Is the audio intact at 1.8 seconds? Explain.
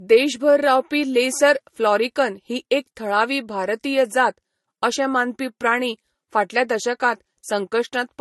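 No. At 1.8 seconds the speech carries the same degradation heard across the whole clip, most likely transcoding between lossy codecs. Nothing above about 11.9 kHz survives, and the artefacts of one encoder are heard together with a second layer of artefacts from the other. That mix fits a low-rate MP3 encode, near 50 kbit/s, re-encoded to Vorbis near 40 kbit/s, with the second encoder wasting bits on the first one's damage.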